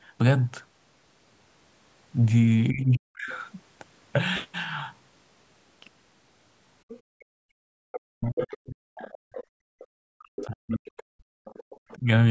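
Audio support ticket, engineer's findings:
Speech suppressed in double talk at 2.7–3.29 s, 8.13–8.94 s and 10.1–12.07 s. Near-end speech drops by around 40 dB in pieces while the far end talks. Likely cause: echo canceller misjudging double talk as echo and attenuating both.

Other side's voice leaking through at 2.95–3.39 s, about 25 dB under the talker, then 6.88–11.96 s, about 15 dB under. Far-end audio from the loudspeaker reaches the mic. Probable component: echo canceller, likely with incomplete echo removal leaving residual.

Background gated by the echo canceller at 7.01–7.85 s and 9.22–9.79 s. Room tone drops by about 29 and 30 dB, then recovers. Echo canceller suppressing the mic hard during loudspeaker playback. Call mic chain high-pass present, no content above 8 kHz.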